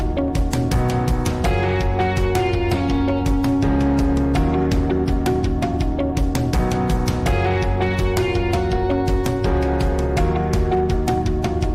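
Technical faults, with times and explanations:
Throughout, hard clipping: the signal was driven about 5 dB past what one stage could pass, so every peak above that ceiling was sliced flat, roughly one sample in twenty. Those squared-off tops add high harmonics, heard as a gritty crackle riding each louder moment.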